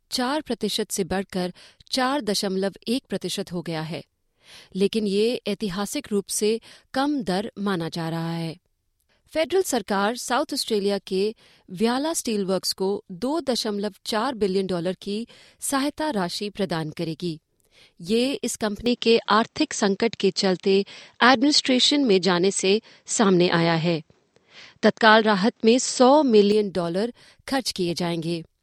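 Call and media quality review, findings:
Input switched to a poorer device, 18.86 s to 26.52 s: sound turns duller and boxier with no gap at the switch, then clears again. Spectrogram shows content ending sharply near 8.1 kHz, a waveform level step of about 5 dB, and a faint new noise floor. Likely cause is the capture path moving to a band-limited microphone or headset call profile.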